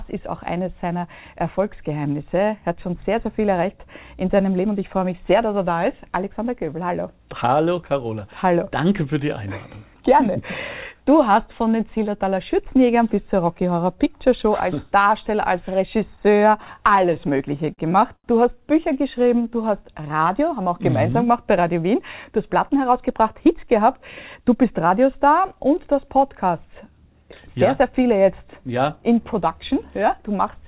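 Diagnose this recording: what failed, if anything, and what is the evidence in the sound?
Between 16.16 and 17.80 s the sound drags and stutters, with 17 brief holds of the sound, the longest lasting 40 ms. Together they fill about 197 ms, roughly 12% of that stretch, and nothing is lost. These are repeated stalls (stutter) in the network and jitter-buffer stage. Packets arrived late or too slowly, the buffer kept running dry, and the receiver extended the last sound each time until data caught up.

At 18.16 to 18.26 s a single sound is held about 82 ms too long, with a faint buzz or dip before the sound resumes where it left off. This is a short stall from a late packet. One packet missed its playout slot, the jitter buffer emptied, and concealment stretched the preceding audio until the packet arrived. That added 82 ms to the playout delay, and no content was dropped.

From 19.19 to 20.17 s the audio runs at 90% speed with unchanged pitch, drawn out. 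This is a jitter buffer slow-down. With its reserve low, the receiver repeated individual pitch periods and bits of pauses many times in a row, inserting 106 ms to rebuild the buffer. The cause is network timing, not the codec, whose band-limit to nothing above 4 kHz fits G.711 mu-law.

Two hurried passages follow at the same pitch: 22.31 to 23.99 s at 107% speed and 24.41 to 25.13 s at 108%. These are jitter buffer speed-ups. The buffer held more than its target, so the receiver trimmed short slices of one or a few pitch periods over and over. That removed roughly a tenth of a second in the first passage and about 70 ms in the second.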